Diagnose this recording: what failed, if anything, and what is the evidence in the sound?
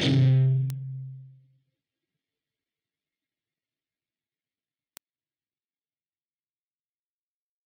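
Bit error spikes at 0.70 s and 4.97 s: each is a single isolated tick, sharp and broadband, with no relation to the surrounding sound. Each lasts one sample and peaks at about -12 dBFS before the waveform snaps straight back. The stage is digital storage or a digital link, where one flipped bit pushed a single sample value off by a power of two. That produces a lone impulse rather than a burst or a dropout.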